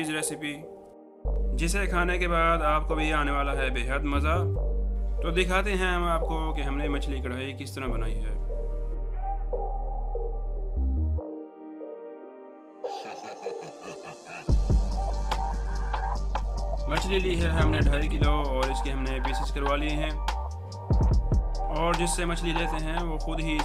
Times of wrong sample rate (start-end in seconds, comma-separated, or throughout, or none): none